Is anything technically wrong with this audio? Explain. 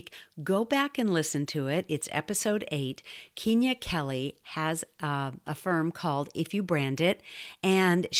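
No, nothing is technically wrong with this audio.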